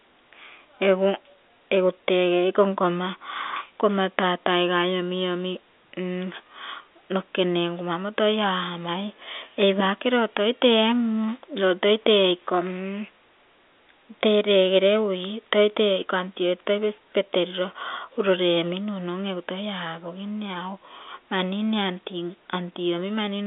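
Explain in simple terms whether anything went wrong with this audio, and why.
Nothing stood out as wrong on listening; the speech has the narrow, slightly boxed-in sound of an ordinary landline call, which is simply how telephone lines carry audio.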